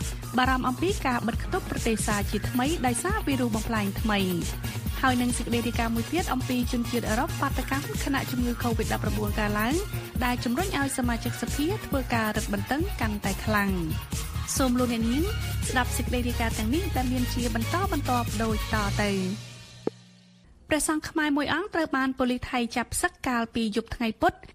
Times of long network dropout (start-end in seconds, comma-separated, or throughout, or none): none